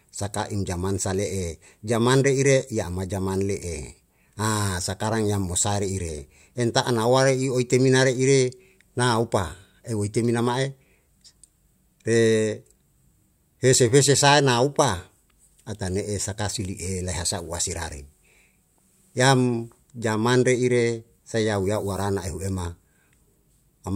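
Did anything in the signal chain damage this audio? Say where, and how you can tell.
No, there's nothing here that points to any stage of the chain having damaged this speech recording, so it can be left as it is.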